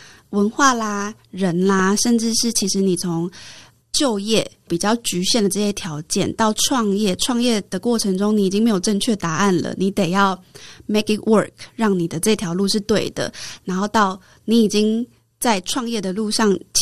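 At 1.79 to 1.82 s a single sharp pop cuts across the speech, peaking roughly 5 dB above it, while the speech carries on underneath. This loud pop is likely a sudden voltage step or pulse, from a plug, a switch, static or a driver glitch, added to the signal and shaped by the circuitry after it.

Two bursts of DAB burbling follow, from 2.41 to 2.62 s and from 8.52 to 8.67 s. Each puts short blips of noise over the speech. The first burst is longer, and the stretch fits about ten MP2 audio frames, the second about six. Weak reception let bit errors, around 0.1 and 0.15 percent, slip past the error correction. Corrupted samples then put short blips of noise in single sub-bands.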